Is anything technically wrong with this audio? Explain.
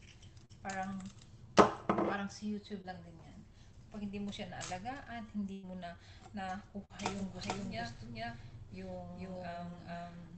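Yes, the call audio has dropouts and, near the end, a second copy of itself.

Short concealed packet loss at 0.45–0.51 s and 2.81–2.88 s: a few hundredths of a second never arrived, and the receiver extended the preceding sound, leaving brief smears or wobbles.

Burst of packet loss at 5.53–5.65 s and 6.85–6.91 s: consecutive audio went missing, about 100 ms then 40 ms. The filler fades to a held buzz or hiss before the audio jumps ahead.

Doubled audio track from 7.12 s to the end: an identical copy, at about the same level and roughly 0.4 s behind, starts abruptly without reverb. It is likely a second, slower capture path.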